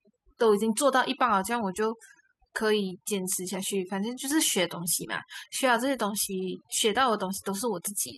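From start to finish the speech carries overdone noise removal: the reducer cut individual frequency bands hard wherever they resembled its noise estimate, so the background drops and breaks up into twinkling specks, unlike plain low-pass dullness.

A block of digital silence lands at 3.10 s, 4.18 s and 5.55 s. The first two last about 2.7 ms, which fits a 128-sample buffer left unfilled; the third is near 0.8 ms. Each is heard as an abrupt tick, not a smeared dropout.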